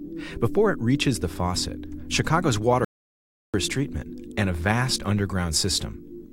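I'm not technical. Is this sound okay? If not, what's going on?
No. The input signal was likely lost for a moment, so the recording carried on writing pure silence. That is an audio dropout to silence: from 2.85 to 3.54 seconds, about 0.69 seconds, the sound cuts out completely, with no background at all, and whatever happened then is gone.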